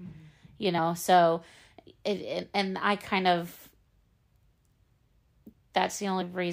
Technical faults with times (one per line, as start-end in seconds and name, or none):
0.77 compressed frames skipped
2.42 compressed frames skipped
6.21 compressed frames skipped